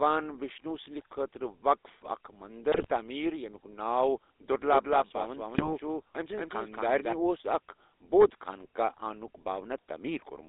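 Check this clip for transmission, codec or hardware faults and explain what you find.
The speech has three faults: GSM full-rate coding throughout, two bursts of GSM bit errors, and a stretch where the audio is doubled.

GSM full-rate codec, across the whole clip. The damage is plainly audible and fits the 13 kbps full-rate codec. The decoder rebuilds speech from a vocal-tract filter fed by a sparse, regularly spaced pulse excitation, so fine detail between pulses is lost. The line band runs from 300 Hz to 3.7 kHz, which makes the sound thin and band-limited, with the buzzy, gravelly roughness typical of this codec.

GSM bit errors, from 2.72 to 2.91 s and from 5.54 to 5.72 s. Corrupted bits reached the decoder at an error rate of 2.61% in the first burst and 1.58% in the second. The first burst's length fits around nine damaged frames, the second's about six. Wrong filter, pitch or gain values distort the spectrum or spike the level frame by frame, so each burst breaks into squawks, pops and gargling.

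Doubled audio track, from 4.63 to 7.13 s. A second full-band copy of the sound runs about a fifth of a second behind the original at roughly equal level. It has no decay and no room colouring, and it starts and stops abruptly at the edges of that span. This is likely caused by the audio being captured again through a slower path, or by an edit leaving two offset copies. The result is a hard, distinct repeat trailing the speech rather than a reverberant tail. The second burst of bit errors falls inside this span.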